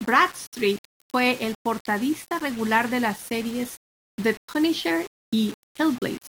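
Low bit depth without dither runs throughout the speech, from start to finish. The samples appear rounded to only about 6 bits with no dither, likely the cause, so the error tracks the signal, roughly 20 dB below it, making quiet passages gritty and the softest moments sputter or drop out.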